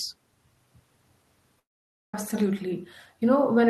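At 1.59 s the speech cuts out until 2.14 s, a gap of about 540 ms. The last sound trails off into a brief fading buzz, then near-silence holds for roughly half a second. It's likely a long network dropout, with that stretch simply lost.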